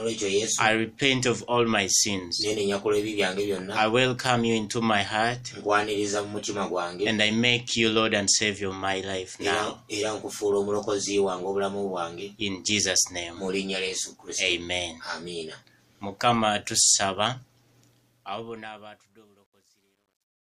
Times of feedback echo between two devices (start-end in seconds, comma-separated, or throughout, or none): none